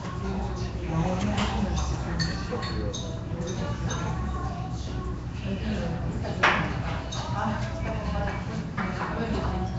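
Right through the clip there's Nellymoser compression, likely the old Flash Asao codec, which fits a 32 kbps stream. It's plainly audible: a rough, hissy noise fill in weak bands, a smeared, underwater blur, and nothing above about 7.7 kHz.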